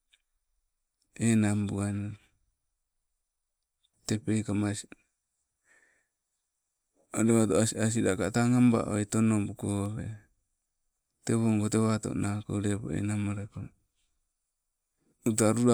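No audible technical faults anywhere in this speech recording.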